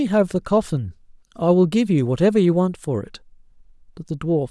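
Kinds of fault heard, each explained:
No technical faults can be heard in this speech recording, and the signal stays continuous and steady throughout.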